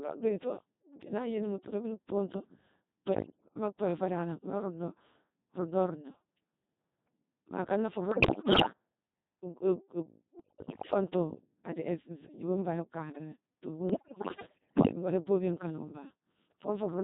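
From start to end the speech passes through the Codec 2 vocoder, heavily damaged, at a rate that fits 2.4 kbit/s. Only pitch, voicing, level and spectral shape survive. The decoder rebuilds the voice from sine waves. It sounds robotic and buzzy throughout.

Bit errors on digital voice radio strike at 3.13 to 3.56 s, at a rate of around 7 percent. They return after "akana fuu" at 8.12 to 8.72 s and again at 10.40 to 10.94 s, both near 15 percent. The last burst runs from 13.90 to 14.96 s, near 10 percent. Flipped bits corrupt whole frames of parameters. Pitch, level and tone jump about, and the voice turns to warbles and bleeps.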